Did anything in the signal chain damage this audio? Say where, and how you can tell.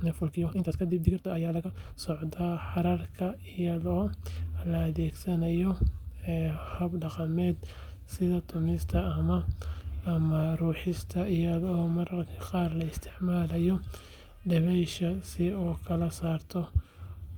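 Yes. A time-stretched section spans 0 to 2.02 s. Speech runs 1.88 times fast at unchanged pitch, sounding rushed. Stretching software likely dropped short pieces.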